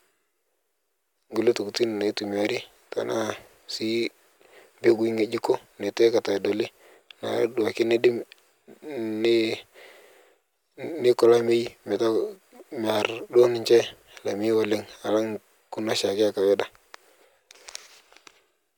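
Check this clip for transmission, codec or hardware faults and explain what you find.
No faults turn up anywhere in the clip.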